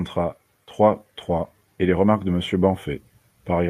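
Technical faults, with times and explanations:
0.15 to 2.87 s, automatic gain rising: the voice and the background noise swell together by about 4 dB over almost three seconds. The automatic gain control judged the input too quiet and raised its gain slowly, lifting everything at once.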